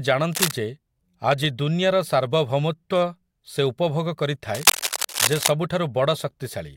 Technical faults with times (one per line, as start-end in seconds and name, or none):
0.32-0.51 cable scratch noise
4.54-5.51 cable scratch noise